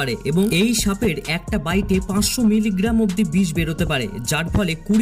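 Nothing in the audio stood out as a technical fault on listening.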